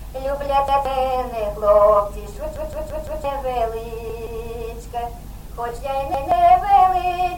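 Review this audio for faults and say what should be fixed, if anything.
Repeated buffer faults occur at 0.68–0.85 s, 2.56–3.24 s, 4.10–4.27 s and 6.14–6.32 s. Each time, fresh audio arrived late and the device replayed its last block of about 171 ms, which fits an 8192-sample buffer. The block sounds once extra at three points, but four extra times at 2.56 s, producing a stutter that drops roughly 0.7 s of material. The other three drop about 0.15 s each. A waveform shows identical segments tiled end to end with abrupt seams. A spectrogram shows the same pattern copied repeatedly, with vertical broadband lines at each join. To prevent this, give the audio callback enough headroom, or use a larger or additional buffer, so that data always arrives before the device needs it.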